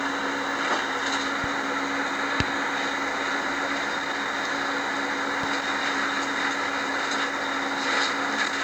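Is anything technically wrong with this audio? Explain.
Yes. There is a loud pop at 1.44–1.46 s and another at 5.43–5.46 s. Each is a single sharp click lasting about 25 ms, most likely a sudden voltage step from a plug, switch, static discharge or driver glitch that the downstream circuitry shapes into a brief pulse. The first sits about 5 dB above the surrounding audio. The second jumps out at about 15 dB above it. In both cases the sound continues uninterrupted underneath.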